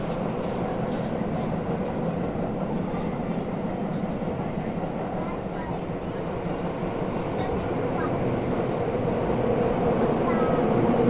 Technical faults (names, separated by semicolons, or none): none